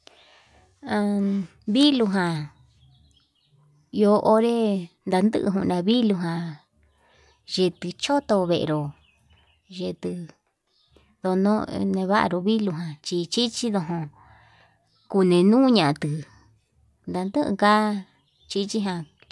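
Speech recording, no audible faults.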